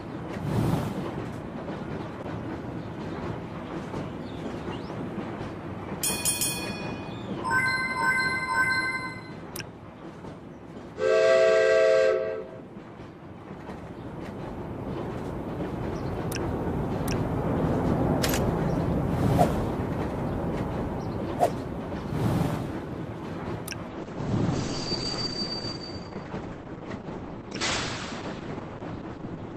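From 23.89 s onward, the sound suddenly loses everything above 8.2 kHz and turns smeared, with no gap. An adaptive stream has dropped to a lower bitrate.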